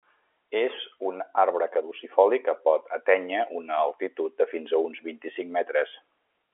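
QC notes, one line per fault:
No faults are present in this speech clip. The G.711 telephone coding is heard as a narrow 300 to 3400 Hz line band with nothing above 3.7 kHz, as expected of a working telephone path.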